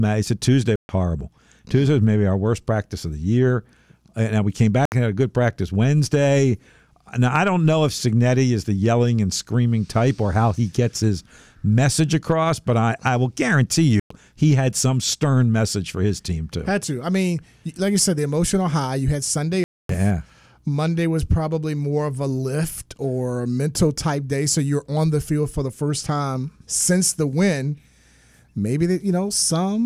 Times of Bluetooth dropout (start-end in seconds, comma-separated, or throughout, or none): 0.76-0.89, 4.85-4.92, 14.00-14.11, 19.64-19.89